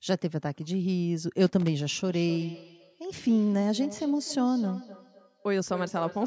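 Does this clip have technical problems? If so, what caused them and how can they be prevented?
Yes. Loose connector crackle from 1.46 to 1.68 s: a worn contact makes and breaks, chopping the signal into irregular scratching. Clean or replace the cable and connector.

Feedback echo between two devices from 2.04 s to the end: the speech returns roughly every 300 ms, at up to about -15 dB relative to the speech. One device replays what another device's microphone sent, and that microphone picks it up again. Mute all but one device in the room.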